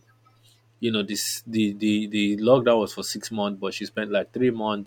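Throughout the speech, a steady ticking at 20 per second rides on the sound and drops away in pauses. This is a resampler restarted on every block: the 48 kHz to 44.1 kHz conversion ran on 50 ms blocks separately, leaving a small error at each block edge.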